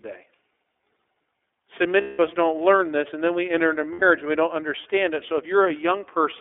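Throughout the speech, the iLBC codec confines the sound to a narrowband line, roughly 300 Hz to 3.5 kHz, with a plainly audible rough, slightly synthetic edge. The grain fits a 13.33 kbps mode with 30 ms frames. Unlike a simple low-pass filter, the damage lies in the coarse excitation coding, not just the missing top end.

At 2.01 to 2.19 s and again at 3.93 to 4.03 s there are lost iLBC frames, 180 ms and 90 ms long, which fits six and three missing 30 ms frames. The decoder repeats the last pitch cycle mixed with noise, so each gap sounds like a held, buzzy vowel rather than silence. The speech snaps back immediately afterwards, without the slow recovery of a codec whose frames depend on earlier ones.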